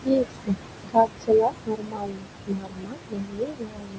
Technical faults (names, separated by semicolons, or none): noise suppressor artifacts; speech cut by the noise suppressor